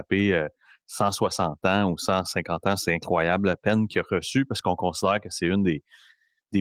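No technical faults are audible.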